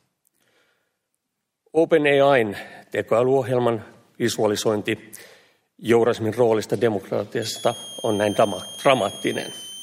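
Near the end there's a switching supply whistle: from 7.42 s right through to 9.82 s a thin high tone sits on top of the sound, wandering between about 3.06 and 3.38 kHz. It's fairly prominent, around 15 dB under the signal. That drifting pitch is the giveaway: a switch-mode power supply dropping into an audible burst mode or beating against another supply, with its frequency shifting as the load moves.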